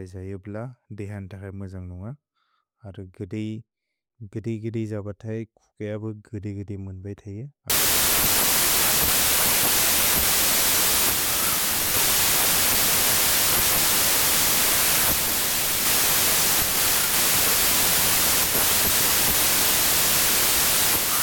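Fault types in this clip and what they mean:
Wrong sample width: from 7.70 s to the end, the bytes are grouped into samples of the wrong size, which fits 32-bit data read as packed 24-bit. Mismatched bytes produce loud noise, with the speech buried, slowed to 0.75 times speed and lower in pitch.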